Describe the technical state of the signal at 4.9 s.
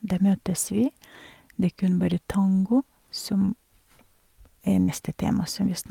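A burst of packet loss runs from 4.82 to 4.90 s: about 60 ms is concealed by a fading hold of the last sound, then speech resumes with material skipped, not a silent dropout.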